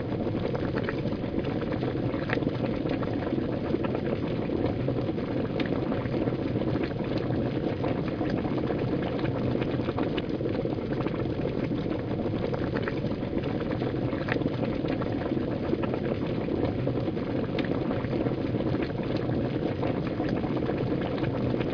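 No technical faults can be heard anywhere in this recording of sounds, and the signal stays steady and intact throughout.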